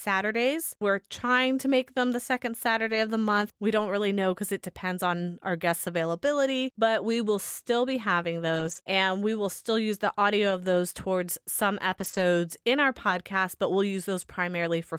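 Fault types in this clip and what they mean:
Lost packet rebuilt from error correction: The receiver filled two short losses with the low-bitrate backup copy carried in the following packet, so there is no silence, only a rougher, noisier patch. One runs 2.87–2.97 s, between "make them the second" and "of the month", and its 60 ms points to three packets. The other, 3.77–3.79 s, sits just before "really know because it". On a spectrogram each shows as a brief grainy, smeared block breaking the clean harmonic lines. The waveform stays continuous.
Scattered short gaps: Between 8.55 and 13.13 s, from after "will still be having" to "but we'll", about four tiny holes appear where packets went missing or arrived late. The decoder bridged each by extending the preceding sound. The longest is about 20 ms and together they cover only about 1% of the stretch, heard as ticks or hiccups. A spectrogram shows thin vertical seams or stretched, frozen slivers. 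The waveform shows small repeated-looking cycles or a slight discontinuity at each.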